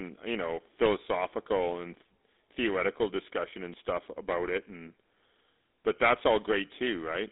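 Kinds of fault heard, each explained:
GSM full-rate codec: The speech has a buzzy, gravelly roughness that is plainly audible from start to finish, and it sounds narrow and boxed-in, with nothing above about 3.8 kHz and a telephone-line band of roughly 300 Hz to 3.7 kHz. The codec rebuilds each voice from a vocal-tract model driven by a thinned-out train of regular pulses rather than the real waveform. That pulse-train excitation causes the grainy texture, and the overall damage fits a 13 kbps rate.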